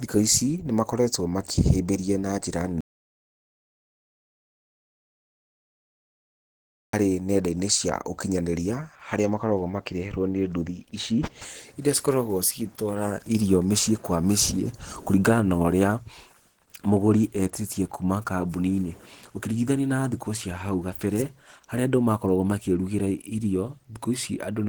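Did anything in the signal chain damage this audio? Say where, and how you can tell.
Yes. At the codec stage, the speech is grainy and hoarse throughout, without MP3-style swirl. That points to Opus compression, likely in hybrid mode at about 16 kbps, with content still reaching 20.1 kHz.

An audio dropout to silence occurs from 2.81 to 6.93 s, roughly 4.1 s. It is silent with no room tone, unlike a quiet passage, likely a lost input recorded as silence.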